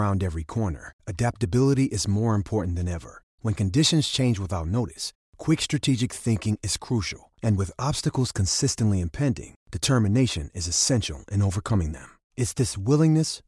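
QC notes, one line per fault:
No audible faults found.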